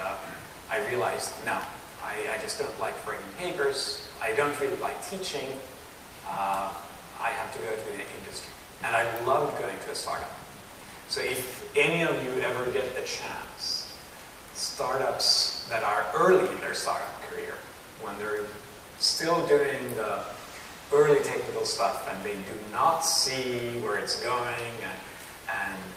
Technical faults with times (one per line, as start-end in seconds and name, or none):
none